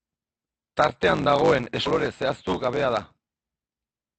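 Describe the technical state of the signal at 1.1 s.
At 1.1 s the speech carries a 100 Hz buzz and runs about 1.16 times fast. This is a block size mismatch (truncated) lasting the whole clip: the ends of longer blocks, fitting 512-sample writes, are discarded.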